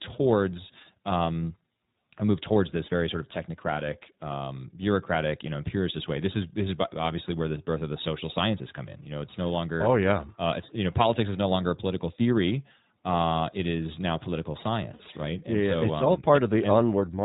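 Throughout, the speech carries the iLBC codec. Nothing above 4 kHz survives, so the sound is narrowband. The damage is plainly audible: a rough, slightly synthetic edge. The coding fits iLBC's 15.2 kbps mode with 20 ms frames.

From 14.94 to 15.02 s, just after "it is now political", lost iLBC frames leave a gap of about 60 ms. That fits three 20 ms frames. The decoder repeats the last pitch cycle with noise, so a short buzzy, held vowel replaces the speech. Clear speech returns almost at once.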